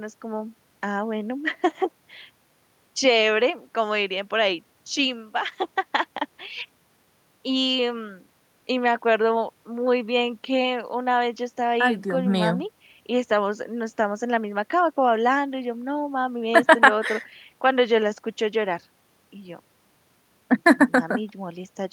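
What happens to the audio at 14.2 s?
Nothing goes wrong at 14.2 s: the speech carries straight through that moment with no dropout, click, distortion or other audible fault.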